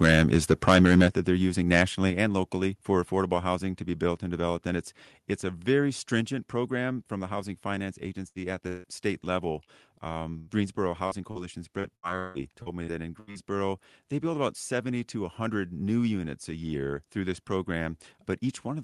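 From 0.02 to 1.07 s the likely cause is microphone overload: the input gain was set about 10 dB too high, so the loudest peaks ran into the converter's ceiling. Around one sample in twenty is flattened, giving the speech a harsh, crackling edge on its strongest syllables.

The call software then stepped the microphone volume down in three single jumps, at 1.08 s by about 6 dB, at 2.10 s by about 4 dB and at 6.21 s by about 3 dB. Each is likely a response to the earlier clipping, and voice and background drop together abruptly at each point.

At 8.27 to 8.38 s and again at 10.39 to 10.50 s, a burst of packet loss removes about 80 ms each time. The receiver stretches the last sound into a fading buzz or hiss, then the speech picks up further along with that piece gone.

Between 8.67 and 8.87 s, what sounds like a long network dropout, likely a stall in delivery, loses about 160 ms. The patched tail fades without reaching silence before the speech returns, skipping ahead past the missing section.

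Short concealed packet loss occurs at 9.64 s, 11.07 s and 11.31 s, each time about 40 ms that arrived too late for the decoder. The gap is filled by extending the preceding sound and blending back, heard as a quick smear or wobble.

From 11.79 to 13.38 s, repeated packet loss produces a robotic sound. Seven separate gaps, the longest 160 ms, leave about 29% of the stretch made of patched audio. The speech turns choppy, with fragments missing, all heard through the Opus call path's roughly 12 kHz audio bandwidth.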